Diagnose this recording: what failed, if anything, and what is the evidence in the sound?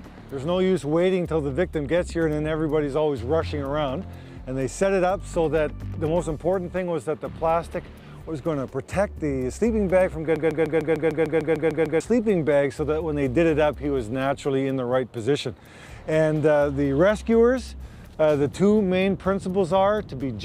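A broken-record loop runs from 10.36 to 12.00 s: a fragment of about 150 ms repeats exactly, back to back, 11 times. The likely cause is a stall in the player, encoder or stream, which kept resending its last held fragment, so the sound due in that span is lost.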